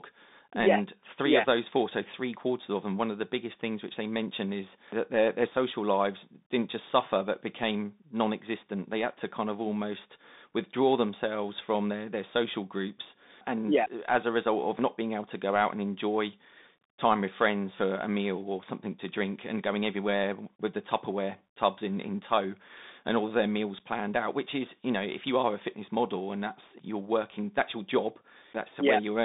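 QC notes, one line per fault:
throughout, Bluetooth CVSD headset codec: the speech has been carried over a narrowband headset link that encodes each sample as a single up-or-down bit with an adapting step size, which fits CVSD at 64 kbps. Only about 200 Hz to 3.7 kHz survives, so the speech sounds thin and boxed-in. Where loud high-frequency energy outruns the step, it distorts; s sounds turn scratchy, and a plainly audible granular hiss sits beneath the speech.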